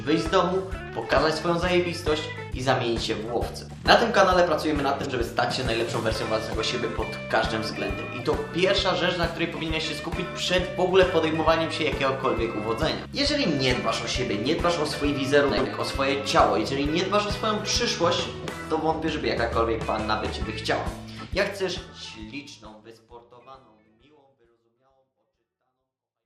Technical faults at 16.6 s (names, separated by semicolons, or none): none